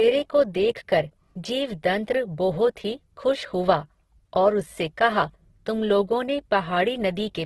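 Speech with heavy Opus compression throughout: nothing above 12.1 kHz, with a flat ceiling on a spectrogram, and grainy, rough tones from noise-filled bands instead of clean harmonics. This is likely CELT-mode encoding starved of bits, consistent with roughly 12 kbps.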